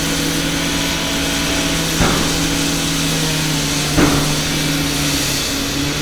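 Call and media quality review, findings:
Nothing to flag here, the audio came through fine with no problems heard anywhere in it.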